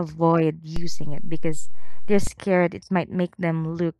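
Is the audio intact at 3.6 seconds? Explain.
Yes, the speech is intact at 3.6 seconds, with no audible fault at that moment.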